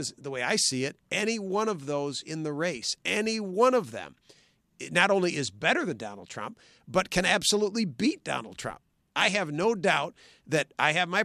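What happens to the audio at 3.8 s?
Nothing goes wrong at 3.8 s: the speech carries straight through that moment with no dropout, click, glitch or other fault to be heard.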